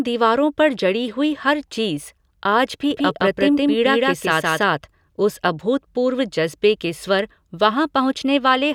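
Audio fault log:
2.91 to 4.63 s, doubled audio track: A second, full-band copy of the speech runs about 150 ms behind the original, at roughly the same level. It has no decay or room colour, so it sounds like a clean, separate slapback rather than an echo. It switches in abruptly at 2.91 s and drops out just as abruptly at 4.63 s. The likely cause is the same signal arriving again through a slower path, or an edit holding two offset copies.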